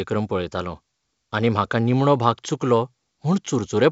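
No technical faults occur in this speech clip; it carries the light upper-band hiss typical of G.722 wideband telephone coding at 64 kbit/s.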